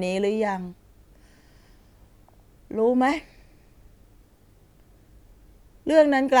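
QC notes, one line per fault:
No faults found in this clip.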